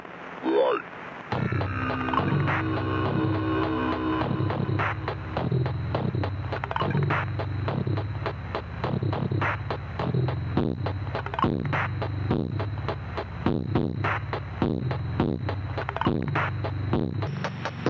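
From 0.0 s to 17.27 s the whole sound has a wrong sample rate fault: it runs at 0.726 times its proper speed and sits about 5.6 semitones low, dull and dragging. That ratio fits audio captured at 22 kHz being played back at 16 kHz without conversion. On a spectrogram every feature is pushed down in frequency and stretched in time, and the original top of the band lands near 8 kHz. On the waveform, events are spaced further apart.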